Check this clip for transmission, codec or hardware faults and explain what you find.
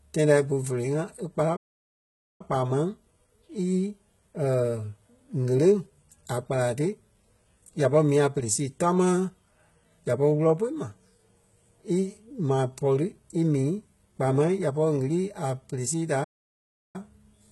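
Two faults stand out: a codec artefact running through the whole speech clip, and two stalls in playback.

The first is a constant HE-AAC compression sound. The treble does not sound dull. Sibilants come out gritty and metallic, with a lisp. This is likely spectral band replication: the top band is rebuilt from copies of lower bands rather than coded, at heavy damage consistent with a bitrate around 16 kbps. Plain low-pass filtering would sound muffled instead.

The second fault is a pair of playback stalls. The output goes silent from 1.56 to 2.41 s, about 0.83 s, and again from 16.24 to 16.96 s, about 0.70 s, just after "sii da". Each gap is likely the player running short of data or being blocked until it recovered.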